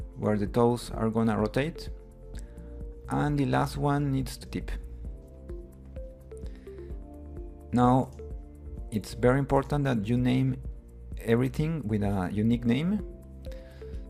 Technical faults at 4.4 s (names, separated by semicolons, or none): skip ahead